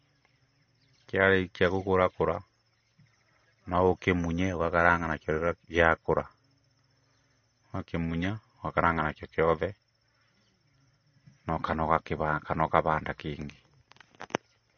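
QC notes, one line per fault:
Throughout, MP3 compression: the speech has nothing above 6.5 kHz and a plainly audible watery, swirly texture, with s sounds chirping metallically and consonant attacks smeared. This is likely an encoder starved of bits, consistent with a rate near 32 kbps, cutting the treble at a fixed point and letting weak frequency lines flicker on and off between frames. Unlike a simple low-pass filter or narrowband channel, the band-limit comes with this warbling, shifting artefact rather than a clean, dull top end.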